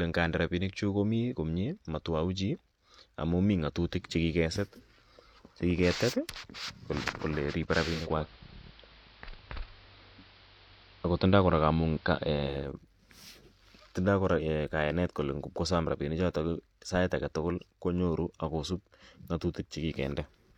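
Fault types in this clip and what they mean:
Digital radio blending to analogue: The receiver lost its digital stream at 7.83 s, just after "kole riibe", and cross-faded over about 450 ms to the AM broadcast of the same station. It returned to digital at 12.76 s. Hiss sits roughly 30 dB under the signal. The level also shifts by about 3 dB at the switch.
Bit error spike: At 16.89 s a single sample jumps to a wrong value and snaps straight back. This happens when one bit flips in memory or on a digital link, which throws the sample off by a power of two. Because only one sample is hit, it is heard as a single sharp tick. The click spreads across the whole spectrum and has nothing to do with the speech around it.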